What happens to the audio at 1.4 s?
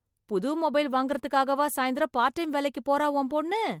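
Around 1.25 to 1.40 s, a lost packet rebuilt from error correction roughens and hisses the speech, consistent with one 20 ms packet replaced by a low-bitrate copy; a spectrogram shows smeared, noisier texture without any gap.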